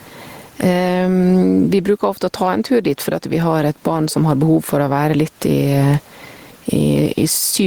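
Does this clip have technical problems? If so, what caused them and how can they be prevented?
Yes. Gain pumping runs throughout the clip: the gain swings by roughly 15 dB, squashing loud and soft passages together, while the room noise sits about 44 dB below the speech. The likely cause is a preamp gain set far too high, with a fast limiter or compressor clamping down on every loud syllable. Lower the input gain so the peaks have headroom, and keep any limiting gentle and slow.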